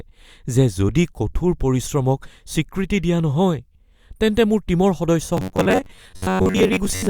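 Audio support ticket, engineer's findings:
Robotic sound from repeated short buffers, 5.37 s through to the end of the clip. Speech goes stiff and metallic, with a steady buzz near 94 Hz that loosely follows the words. Likely a playback buffer underrun: the last chunk gets replayed to fill gaps while real audio is skipped, so about half of what you hear is repeats. The 94 Hz points to a chunk of about 10.7 ms.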